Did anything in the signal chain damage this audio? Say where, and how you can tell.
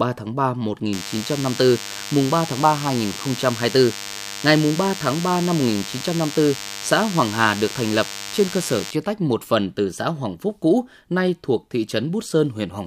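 Yes. From 0.93 s to 8.91 s a thin, steady buzz sits under the speech, stopping just before "tách một phần từ". It is pitched at 100 Hz with a dense stack of harmonics and is only about 10 dB below the speech. That pattern is DECT cordless phone buzz, picked up in the analogue wiring: a nearby DECT handset or base transmits a radio burst every 10 ms, and the audio circuitry rectifies each burst into a sharp pulse.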